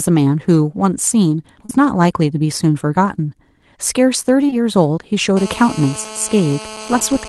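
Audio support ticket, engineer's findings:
Short concealed packet loss, 1.65–1.71 s and 4.47–4.54 s: brief smear/wobble where missing audio (~40 ms; two back-to-back 20 ms gaps) was synthesised from preceding sound, then crossfaded back.

GSM phone buzz, 5.37 s to end: steady raspy 217 Hz buzz with dense harmonics, about 16 dB below signal. Nearby 2G handset on a call, RF bursts rectified by audio circuitry.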